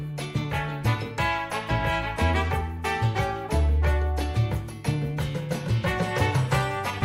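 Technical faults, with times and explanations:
5.04 to 7.05 s: resampler restarted on every block, likely during a 44.1 to 48 kHz conversion. Each 40 ms block lacks neighbouring samples at its edges, producing a 25 Hz tick.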